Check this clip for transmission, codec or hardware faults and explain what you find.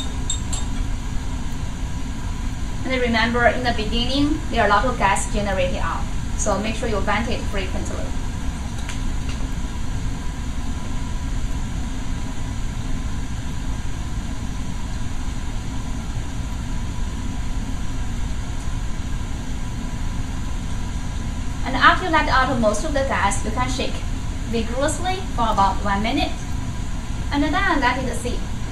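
Nothing faulty can be heard anywhere in this recording.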